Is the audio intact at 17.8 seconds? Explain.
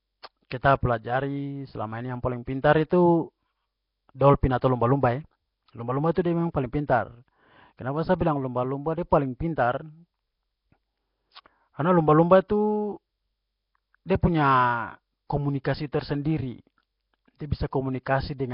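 No. At 17.8 s, like the whole clip, the speech has the rough, hissy, underwater smear of likely Nellymoser compression, with starved bands noise-filled and nothing above 5.3 kHz.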